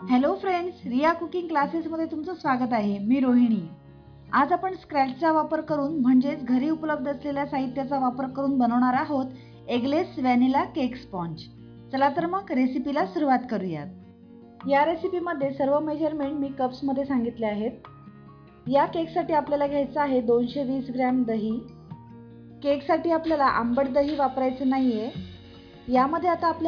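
No technical faults are audible.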